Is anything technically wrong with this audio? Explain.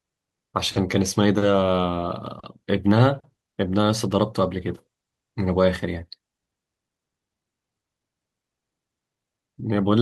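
Yes. From 3.61 to 5.67 s the speech turns rough and watery, losing the clean detail heard before and after, then returns to its earlier quality. This is a call bitrate drop: the call's bandwidth estimate fell, so the encoder had far fewer bits to describe the sound and coded it more coarsely. The degradation fits a fall from about 64 kbps to 23 kbps, held at its lowest for roughly two seconds before the rate recovered.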